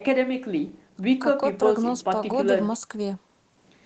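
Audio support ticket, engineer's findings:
No faults found in this speech clip; the call microphone processing and WebRTC call path behave as expected, with content ending around 8 kHz.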